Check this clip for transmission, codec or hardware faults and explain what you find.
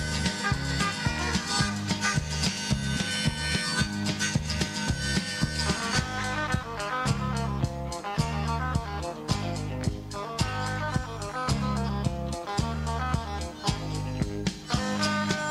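No faults can be heard anywhere in this clip.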